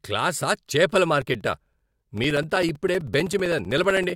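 It's a speech clip, and from about 1.22 s, right after "క్లాసా చేపల", to 4.1 s it's hit by periodic USB or driver dropouts. Every 64 ms something stalls the bus or audio driver and a few milliseconds of signal get swapped for silence, giving a steady ticking buzz of roughly fifteen clicks a second that rides only on the parts where there's signal. That's around fifty little gaps in total, evenly spaced, which points at a background task firing on a fixed timer.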